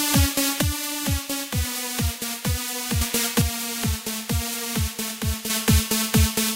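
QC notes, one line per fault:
0.61 to 3.01 s and 3.41 to 5.50 s, one channel drops out. The level falls abruptly by about 6 dB at each start and recovers at each end. Likely one stereo channel went silent, halving the shared content in the mono sum.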